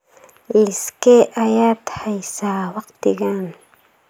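No technical faults are audible anywhere in it.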